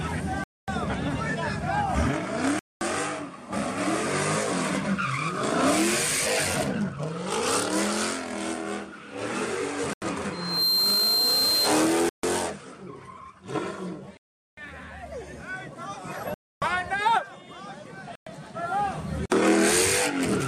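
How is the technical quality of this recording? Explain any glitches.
The recording has two kinds of fault: repeated dropouts and one burst of feedback.

Seven dropouts are likely Bluetooth stalls, at 0.44, 2.59, 9.93, 12.09, 14.17, 16.34 and 18.15 s. Radio interference delayed packets, the headphone buffer emptied, and playback waited for resends. Each is a hard cut to silence lasting between 85 and 400 ms before the audio resumes.

From 10.32 to 11.80 s there is loudspeaker feedback squeal. The microphone picked up its own loudspeaker, and the loop gain rose above one at 4.2 kHz. That single tone builds within about a third of a second into a piercing squeal, roughly 5 dB above the program.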